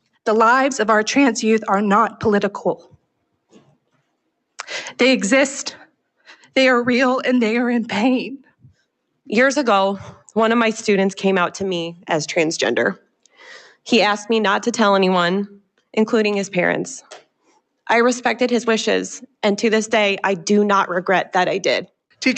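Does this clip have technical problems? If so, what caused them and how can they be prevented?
Yes. The sound is cut by the noise suppressor at 2.79–3.05 s, 3.34–4.0 s, 12.95–13.41 s, 13.63–13.86 s and 17.02–17.59 s. Mistaking sustained or decaying passages for noise, it pulls them down by about 17 to 19 dB. A waveform shows sudden envelope dips there, and a spectrogram shows those stretches fading across all bands. Reducing the suppressor's aggressiveness, or bypassing it for this kind of material, would prevent this. The audio also passed through an Opus call path limited to 8 kHz, which appears on a spectrogram as an empty region above that frequency.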